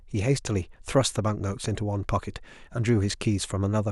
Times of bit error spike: 0.46

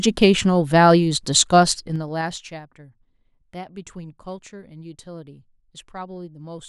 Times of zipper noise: 1.76-2.60

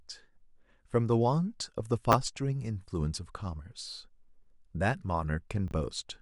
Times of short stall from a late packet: none

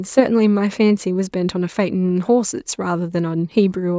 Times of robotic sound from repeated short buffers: none

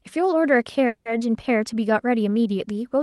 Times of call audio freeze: 0.87-1.07

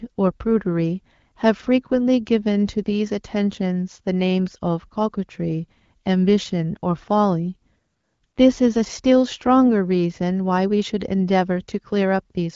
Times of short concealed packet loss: none

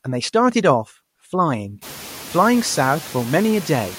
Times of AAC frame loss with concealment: none

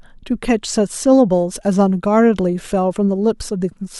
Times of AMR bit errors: none

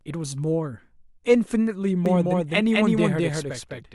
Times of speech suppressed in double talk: none

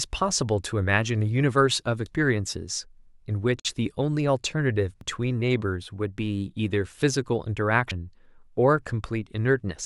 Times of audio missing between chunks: 2.06, 5.01, 7.91

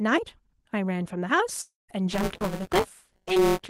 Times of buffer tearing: 2.11-3.70

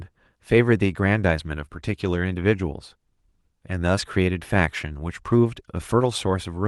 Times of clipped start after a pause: none

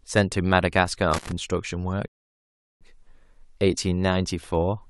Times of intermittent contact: 1.14-1.32

